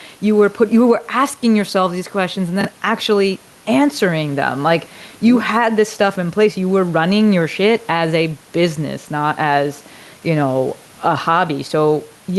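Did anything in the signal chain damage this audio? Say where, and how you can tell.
Yes. Gain pumping runs throughout: the gain swings by about 5 dB, squashing loud and soft parts closer in level, likely from excessive input gain hitting a fast limiter or compressor.

Chunks out of order at 2.61 to 2.65 s, at the driver or buffer stage: an 11.61 ms chunk plays two chunks late. It sounds jumbled, but unlike a dropout nothing is missing.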